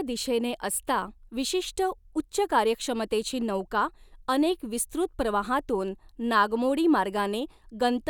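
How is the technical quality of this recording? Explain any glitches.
No glitches can be heard anywhere in this speech recording. There is nothing to explain, because no technical fault shows up at any point in the audio.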